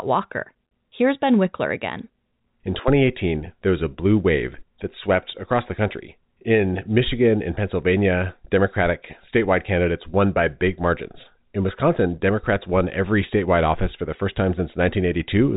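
No technical faults occur in this speech at any point.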